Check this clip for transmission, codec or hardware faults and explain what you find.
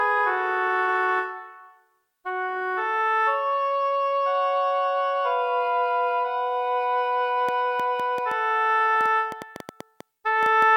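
One fault is audible: a train of clicks from 7.49 to 10.63 s. About fifteen similar pops arrive unevenly, around 5 per second. Interference is the likely source. They rise above the sound.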